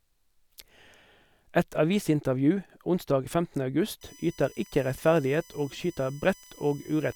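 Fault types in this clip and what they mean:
USB whine: from about 4.01 s to the end, a steady 1 kHz whine with harmonics, strongest near 6 kHz, sitting roughly 30 dB under the speech, leaking in from USB bus current.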